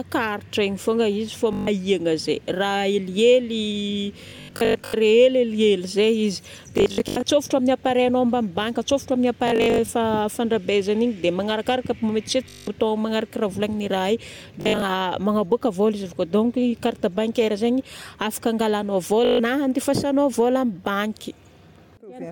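Bluetooth stutter: audio packets dropped or arrived late, so the receiver kept replaying its last short buffer, giving a buzzing machine-gun repeat in the speech before it jumped ahead. This happens at 1.53–1.67 s, 4.28–4.94 s, 6.78–7.23 s, 9.48–9.89 s, 12.49–12.68 s, 14.61–14.82 s, and 19.25–19.39 s, between "bancaire zaigny afaka angalagnao" and "andefasagnao vola".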